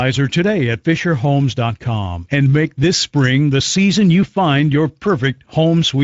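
Speex codec damage runs throughout the speech. It sounds noisy and hoarse, consistent with a mid bitrate near 17 kbps. Nothing is heard above 7.7 kHz.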